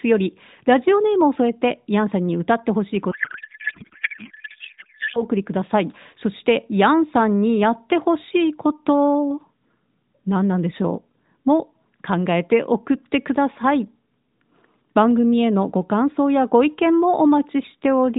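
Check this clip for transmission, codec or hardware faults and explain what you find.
One fault: a codec payload misread from 3.12 to 5.23 s, heard through an AMR narrowband mobile codec path whose light, band-limited character suggests a rate near 12.2 kbps. The receiver unpacked octet-aligned AMR frames as bandwidth-efficient, so every field landed in the wrong bits. The decoder synthesised from nonsense parameters, turning the speech into garbled, warbling noise that barely tracks it.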